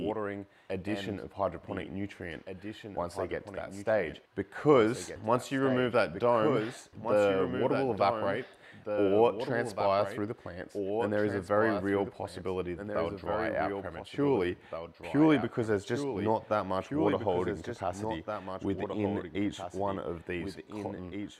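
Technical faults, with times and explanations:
Throughout, doubled audio track: a second, full-band copy of everything trails the original by about two seconds, sitting a few dB lower, around 5 dB down. It's dry and clean, with no decay or room tone, so it reads as a hard repeat rather than an echo. That points to the same feed likely being picked up twice, once through a slower path, or an edit leaving two copies out of step.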